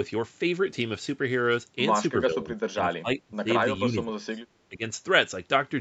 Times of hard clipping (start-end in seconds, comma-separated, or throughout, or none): none